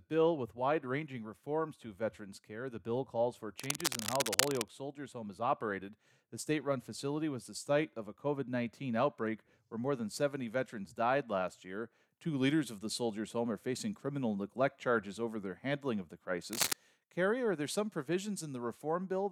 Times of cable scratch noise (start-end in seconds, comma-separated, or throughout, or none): 3.59-4.68, 16.53-16.73